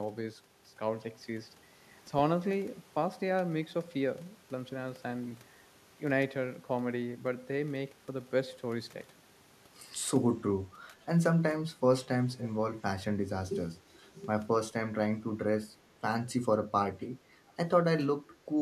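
Echo leak at 12.33 to 12.49 s and again at 17.48 to 17.53 s: a faint, delayed copy of the speech returns about 0.48 s after the original, first as a short scrap sitting well below the voice, then as a barely audible trace. The likely cause is a far-end loudspeaker whose echo canceller let part of what its microphone picked up slip through, sending that residue back down the line.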